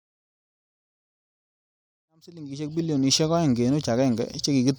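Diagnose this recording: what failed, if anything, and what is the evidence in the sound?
Nothing in this speech recording points to a failure at any stage: the level rises in a smooth fade-in from around 2 s that reaches full level by 3.35 s, with no click or hard edge, as an editor would shape it.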